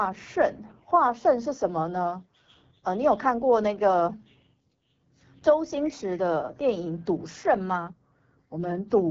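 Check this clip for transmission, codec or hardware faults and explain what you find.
One codec fault is present across the whole speech clip. The AMR wideband (HD Voice) codec is coding at a low rate, fitting its 8.85 kbit/s mode. Its sparse pulse-driven vocal tract model sounds plainly rough and raspy. A spectrogram shows blurred harmonics, noise-like fill from 6.4 kHz, and nothing above 7.5 kHz.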